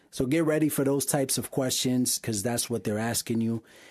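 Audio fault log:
2.15 to 2.18 s, AAC frame loss with concealment: a brief smeared, noisy blur in the speech. Decoded audio went missing for about 20 ms, which fits two lost frames of the low-delay AAC stream likely in use. The decoder filled the gap by reshaping the last good spectrum.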